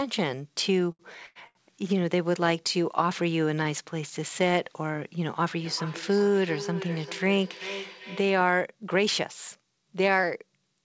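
Speech over a call link, with an 8 kHz upper limit consistent with G.722 wideband coding, showing two kinds of fault. The first is a short stall from a late packet, heard four times: 0.92 to 1.02 s, 1.26 to 1.38 s, 1.47 to 1.73 s, and 3.63 to 3.68 s. Each time a packet arrived after its playout deadline, the jitter buffer emptied, and the receiver held the last sound for roughly 73, 92, 77 and 19 ms respectively before resuming where it left off. Nothing is lost, but the sound drags at each point, and playback ends up that much later. The second is feedback echo between two devices, from 5.59 to 8.55 s. A second device in the same room replays the far end, and the first microphone picks it up again. Because each echo canceller removes only its own device's output, the sound returns at about 0.4 s intervals, peaking at about 13 dB below the direct speech, each repeat thinner and more ringing than the last.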